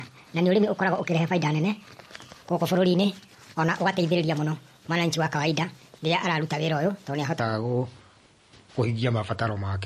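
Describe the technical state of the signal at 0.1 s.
At 0.1 s the speech sits inside a section at the wrong speed, running from 0.0 to 7.40 s, likely from playback against the wrong clock: it runs 1.33 times fast, raising pitch about five semitones. MP3 compression is present throughout. A watery, swirly texture points to a likely low bitrate near 40 kbps.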